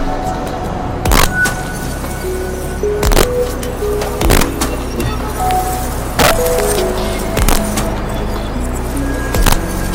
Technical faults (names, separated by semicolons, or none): integer overflow